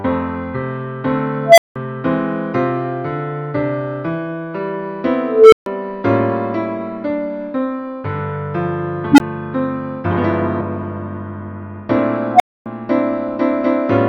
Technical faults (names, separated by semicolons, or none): unstable filter; compressed frames skipped